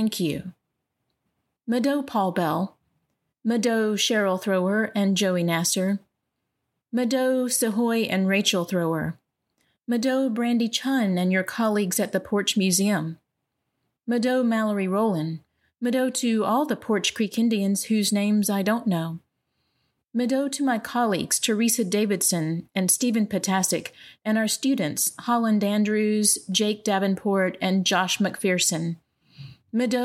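No technical faults are audible.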